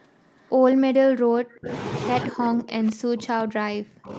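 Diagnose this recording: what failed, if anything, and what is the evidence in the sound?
Echo leak in the call processing: a faint delayed copy of the sound trails it by 203 ms, very low at about 40 dB down from 0.0 to 0.5 s, then stronger at about 20 dB down from 0.71 to 0.75 s. This is likely residual loudspeaker pickup the echo canceller missed. Unlike room reverberation, it is a distinct repeat at a fixed delay rather than a smooth decay.

Speech suppressed in double talk, also in the call processing: the level drops by roughly 35 dB from 1.5 to 1.7 s, then by about 40 dB from 2.28 s to the end. The likely cause is an echo canceller clamping down while both sides spoke. Unlike packet-loss dropouts, these dips come from the echo canceller turning the voice down, not from missing data.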